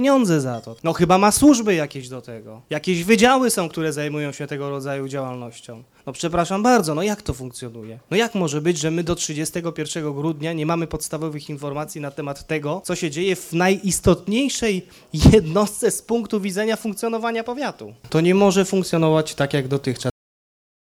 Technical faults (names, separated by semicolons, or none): cut-off end